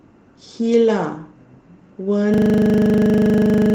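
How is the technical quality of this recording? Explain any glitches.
The recording is marred by one serious glitch that takes over its final stretch. A system hang loop begins at 2.34 s and runs to the end of the clip. The computer or audio driver stalled while the sound hardware kept replaying whatever was left in its ring buffer, so a single 40 ms slice of speech repeats exactly, over and over. At 25 repeats per second this comes across as a harsh, rattling buzz rather than continuing speech.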